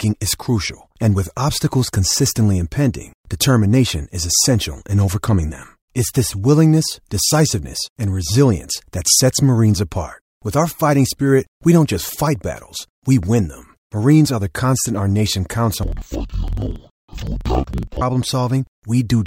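From 15.83 to 18.05 s, the speech drops an octave and sounds doubled and choppy. This is interleaved audio read as planar. Each 46 ms block, which fits a 2048-sample buffer, is split wrongly into half-speed channels, so it stutters about 21.5 times a second.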